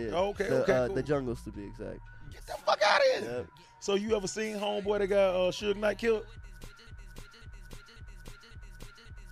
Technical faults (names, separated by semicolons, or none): broken-record loop